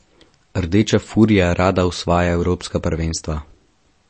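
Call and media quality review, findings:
Block size mismatch (truncated), throughout the speech. Steady buzz at 46.9 Hz, fits a 1024-sample write block whose tail is discarded by the reading stage. Playback speed essentially unchanged (1.0x), pitch normal. Waveform: discontinuity at every block boundary, evenly spaced about 21 ms apart. Spectrogram: vertical striations at that spacing, with a harmonic comb on 46.9 Hz. Component: buffer handoff between adjacent processing stages.

MP3 compression, throughout, plainly audible. Watery, swirling texture, smeared consonant attacks, metallic chirp on s sounds. Nothing above 8.3 kHz, a hard lowpass consistent with a low-bitrate encode around 32 kbps. Likely cause: MP3 encoder starved of bits, cutting treble and gating weak frequency lines frame by frame. Spectrogram: flat ceiling at 8.3 kHz, patchy holes and flickering islands below it. Waveform: pre-echo blur ahead of onsets.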